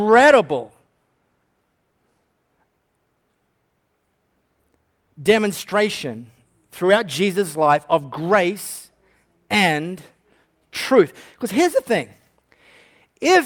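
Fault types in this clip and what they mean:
No faults are audible in this speech recording.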